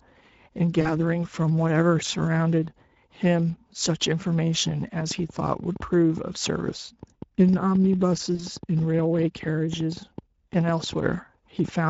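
Throughout, the speech sounds hoarse and grainy with a noisy top end: Speex codec damage, consistent with a middle setting around 16.8 kbps that leaves little detail for the excitation. From 0.81 to 0.93 s, the sound smears into a stretched, fading sound as VoIP packet loss is concealed by the speech codec, which covers about 40 ms of missing audio by extrapolating and then recovering slowly. From 4.67 to 11.69 s, a train of clicks ticks irregularly at roughly seven per second, some fifty in all, peaking about 5 dB above the speech and audible in pauses, likely from electrical interference or a struggling interface. From 8.35 to 8.47 s, the same stretched, fading concealment returns where another 40 ms of packets was lost.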